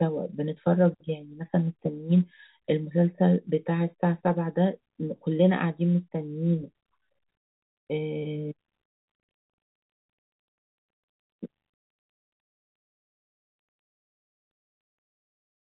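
Nothing goes wrong anywhere in this speech; it just has the narrow sound of G.711 telephone coding, with nothing above about 3.8 kHz getting through.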